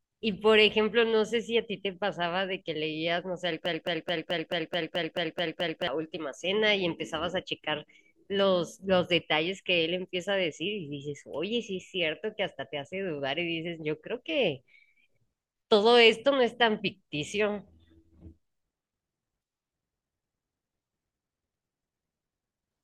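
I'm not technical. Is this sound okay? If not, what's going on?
No. A broken-record loop runs from 3.66 to 5.88 s. A 0.22-second slice of speech repeats ten times, likely from a stalled player, and the speech that belonged there is lost.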